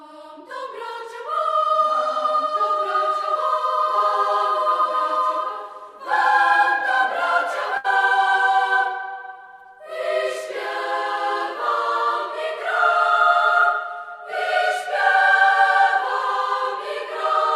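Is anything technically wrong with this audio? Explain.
Yes, there is one fault. A burst of packet loss occurs from 7.77 to 7.86 s. A short run of audio failed to arrive in time to play, so the receiver filled the hole by stretching the last good sound for about 66 ms and fading it as the gap continued. When playback resumes, roughly 60 ms of the original audio has been skipped. The result is a brief smeared, dying hold followed by a slight jump forward.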